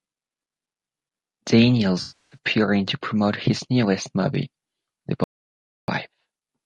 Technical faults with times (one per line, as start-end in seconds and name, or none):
0.00-6.65 low-delay AAC compression
2.01-2.37 AAC frame loss with concealment
5.24-5.88 audio dropout to silence